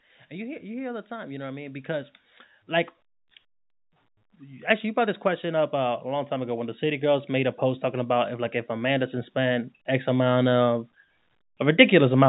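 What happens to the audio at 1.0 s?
At 1.0 s the level is in the middle of an automatic gain rise. It runs from 0.30 s to 2.18 s. The gain control judged the incoming speech too quiet and turned its gain up step by step, by about 5 dB in total. The speech and the background noise swell together, so the room seems to come up with the talker. The change is gradual, spread over nearly two seconds, and there is no sudden jump.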